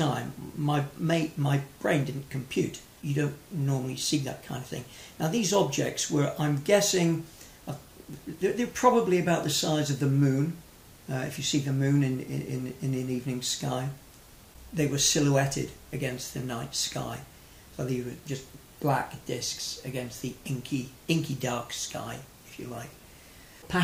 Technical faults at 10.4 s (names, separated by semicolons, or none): none